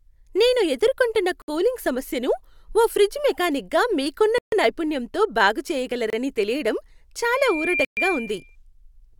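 At 1.42 s, 4.38 s and 6.10 s the speech drops out in what is likely a Bluetooth stall: packets held up by radio interference let the headphones' buffer run empty, so playback halts until resent data arrives. Each is a clean cut to silence, lasting 62 ms, 139 ms and 28 ms, after which the speech resumes. From 7.22 s to 8.56 s a loudspeaker feedback squeal takes over. A microphone is hearing the loudspeaker it drives, and at 2.4 kHz the loop gain tops unity, so that one frequency feeds on itself. It grows over about half a second into a steady whistle roughly as loud as the speech. Within it, at 7.85 s, another stall silences everything for 122 ms.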